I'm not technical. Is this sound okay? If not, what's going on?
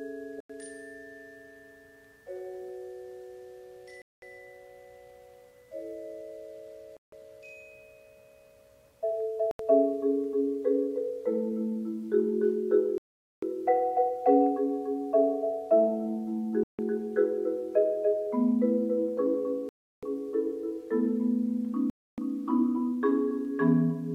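No. The sound keeps dropping out to brief silence, then carrying on, at 0.40, 4.02, 6.97, 9.51, 12.98, 16.63, 19.69 and 21.90 seconds, with gaps from under a tenth to nearly half a second. This is a Bluetooth stall: interference likely delayed the wireless signal, so the headphones ran out of sound until it caught up.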